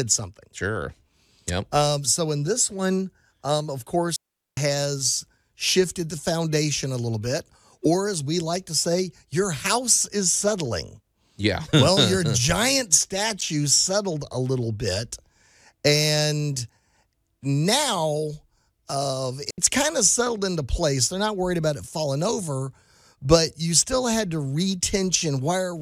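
At 4.16 s the speech drops into a clean hole of near silence lasting about 0.41 s, and at 19.50 s a shorter one of about 76 ms follows. Both are digital wireless dropouts: the receiver lost too much data and muted quickly, leaving no noise burst on either side.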